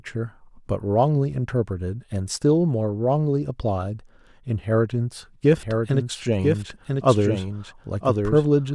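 A second, slower capture path or an out-of-step edit has likely mixed this speech clip in twice, creating a doubled audio track. From 5.57 s to the end, a full-band copy trails about one second behind, roughly 5 dB quieter, starting abruptly and carrying no decay or room colour.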